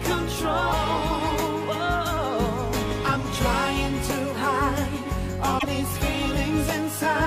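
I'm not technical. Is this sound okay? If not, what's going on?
No, not quite. At about 5.58 s there's a brief glitch, roughly 70 ms, where the sound skips forward and briefly garbles. That's likely a broken MP3 bit reservoir: a chunk of the file went missing, and what came next couldn't find its data.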